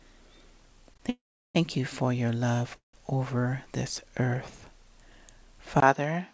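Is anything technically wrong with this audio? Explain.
Yes. There are short stalls from late packets, two call audio freezes, and an input switched to a poorer device.

Short stall from a late packet: at 0.94 s and again from 0.97 to 1.01 s, a packet missed its slot and the jitter buffer ran dry. The receiver stretched the last sound for about 15 ms, then 20 ms, and resumed from the same point, so nothing is lost. What you hear is a brief hold on the sound, a slight buzzy smear, and the stream ending up 20 ms later than before.

Call audio freeze: from 1.09 to 1.57 s and from 2.77 to 2.95 s, a much longer wait most likely came from packets held up in transit, which emptied the jitter buffer. The receiver extended the last sound into a fading buzz that dropped to silence, about 370 ms of it in the first freeze and 130 ms in the second. When the packets arrived, playback continued where it had stopped. 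Little is missing, but gaps of 452 ms and 168 ms have been inserted.

Input switched to a poorer device: at 5.80 s, after about 20 ms of silence, the capture most likely changed to a lesser microphone or a headset's call profile. From there to the end, nothing passes above 6.4 kHz, narrower than the 8 kHz ceiling that the G.722 call path gives the earlier audio, so the tone turns duller. The level stays roughly the same, and a new noise floor sits around 45 dB below the signal.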